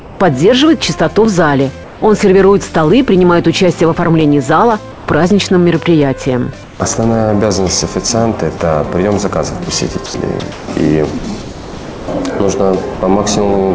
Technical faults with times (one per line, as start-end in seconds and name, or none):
0.00-0.20 comfort noise in place of the background
1.25 block of digital silence
1.84-2.02 comfort noise in place of the background
4.21 block of digital silence
4.92-5.08 comfort noise in place of the background
6.64-6.80 comfort noise in place of the background
8.58 sound dropped by the voice detector
10.06-12.08 sound chopped by the voice detector
12.94-13.02 sound dropped by the voice detector